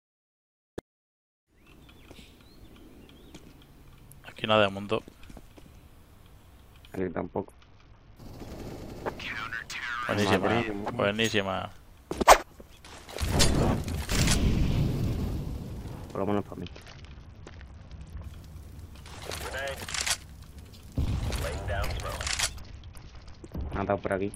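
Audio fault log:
6.98–8.17 s, 16.62–18.24 s and 22.59 s to the end: Bluetooth SBC bit pool drop. Treble dulls and gritty noise rises as the upper sub-bands lose their bits, which fits a bit pool falling from 28 to 7, near 66 kbps.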